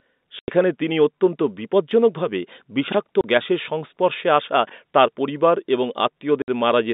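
Speech heard over a telephone-band line, roughly 200 Hz to 3.7 kHz with G.711 A-law coding, is broken by abrupt dropouts of dead silence at 0.39 to 0.48 s, 3.21 to 3.24 s and 6.42 to 6.48 s. These gaps last 90, 30 and 60 ms, all multiples of 30 ms. This is packet loss filled with silence: the receiver inserted nothing in place of missing packets, which fits 30 ms packets. Separately, brief jumbled moments occur at 2.88 to 2.94 s and 4.67 to 4.72 s. These are chunks out of order. A chunk of about 21 ms was delivered late, by two chunks and then by one, and played after audio that should have followed it, leaving hard joins.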